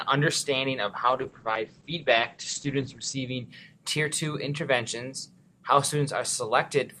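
A call bitrate drop runs from 1.05 s to 3.53 s. The sound turns rough and muffled, bottoming out for about 2.1 s, which fits an encoder squeezed from roughly 48 kbps down to near 11 kbps. On a spectrogram, content above 8 kHz vanishes, where it previously reached 20 kHz.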